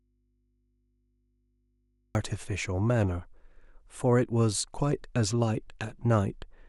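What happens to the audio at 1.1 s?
At 1.1 s the sound is in an audio dropout to a faint residue, running from the start to 2.15 s. Only mains hum remains, far below normal level, likely from a live input that lost its signal.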